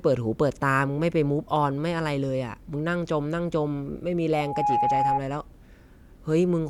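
From 4.33 s to 5.21 s the speech is overtaken by loudspeaker feedback squeal. The microphone is hearing its own loudspeaker, and at about 832 Hz the loop gain has passed unity, so that tone feeds itself and swells over roughly a third of a second into a steady whistle sitting a little above the speech, about 5 dB louder. On a spectrogram it shows as a single bright horizontal line at 832 Hz, and the waveform envelope thickens sharply.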